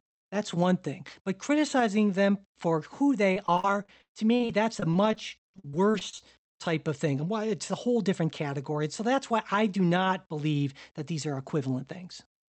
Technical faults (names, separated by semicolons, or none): repeated packet loss (robotic sound)